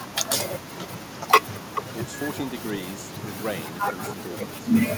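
From 1.65 to 1.83 s, a short copy of the speech returns about 435 ms late, at roughly the same loudness as the original. This echo leak likely comes from a far-end loudspeaker whose echo canceller let the microphone pickup through and sent it back down the line.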